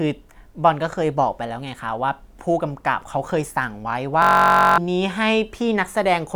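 From 4.22 to 4.78 s a system hang loop replaces the speech. The driver stalled while the hardware replayed one 21.33 ms slice, which fits a 1024-sample buffer. The exact repeats make a steady 46.9 Hz buzz rather than a dropout's silence, and roughly half a second is lost.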